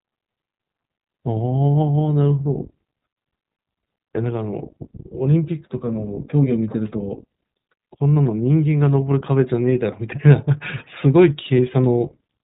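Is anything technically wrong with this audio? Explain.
Yes. The speech carries iLBC codec damage from start to finish. Nothing above about 3.8 kHz comes through, so the sound is narrowband and boxy, with dull sibilants. The codec codes each short frame's excitation on its own, without drawing on the frame before. The texture fits 20 ms frames at around 15 kbps. That independence leaves a plainly audible roughness. The voice takes on a slightly synthetic edge.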